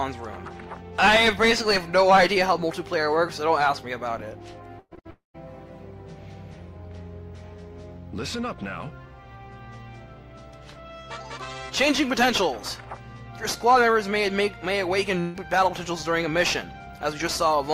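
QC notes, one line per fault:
4.79–4.93 s, burst of packet loss: about 120 ms of sound fails to arrive, and the receiver fills roughly 117 ms of that by repeating the last sound at a falling level. The fill sounds like a held buzz or a fading hiss and includes about 40 ms of silence before the sound resumes further on. On a spectrogram the fill appears as a smeared, decaying band that ends in a blank strip, followed by an abrupt restart.
4.95–4.99 s, short concealed packet loss: about 20 ms is missing, and the receiver bridges it by continuing the preceding sound, extended along its pitch or as shaped noise, then blends back into the real signal. It is heard as a brief smear or wobble in the middle of this cluster of faults. On the waveform, a short patch of repeated cycles or noise of the same shape sits between the two bursts, with no gap.
4.99–5.07 s, burst of packet loss: a further 60 ms is lost, and about 59 ms is filled by continuing the last sound and turning it down, again as a buzz or hiss. 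On a spectrogram this shows as a short stretch of flattened, fading texture in which the detail of the sound stops changing.
5.11–5.36 s, long network dropout: about 240 ms never plays, most likely because no audio arrived for that stretch. Roughly 230 ms is filled, and the continuation fades until about 150 ms of it is silence. The sound then returns further on, without the lost part. On the waveform the envelope decays into a flat line before the signal jumps back in, and the spectrogram shows an empty column.
15.20–15.36 s, burst of packet loss: about 140 ms is lost, and about 139 ms is filled entirely by the decaying continuation, with no silent stretch, before the sound resumes further on. It is heard as a held buzz or fading hiss. On a spectrogram it looks like a uniform, fading smear with a hard edge where the real sound returns.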